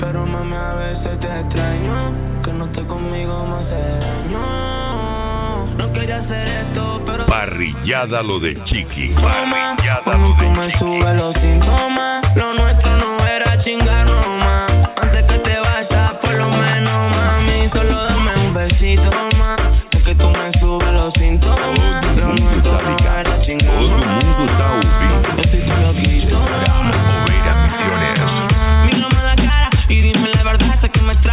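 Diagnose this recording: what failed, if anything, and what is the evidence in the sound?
Nothing in the audio points to a failure at any stage: it has the narrowband character of a call path running G.711 mu-law at 64 kbps, with no content above 4 kHz, which is simply the bandwidth that codec is built to carry.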